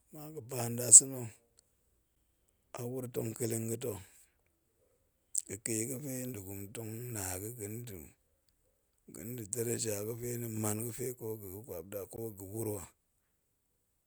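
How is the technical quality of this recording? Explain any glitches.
The speech has two brief dropouts, each a gap at a join of encoded pieces. The audio was encoded in separate pieces and then joined without trimming, so each join keeps the encoder's start-up delay and the padding of the previous piece's last frame. The first gap, at 2.15 s, lasts about 11 ms. The second, at 12.16 s just after "kwap da ko", lasts 16 ms, ten seconds after the first. Each is a short hole with softened edges, and the speech resumes where it stopped.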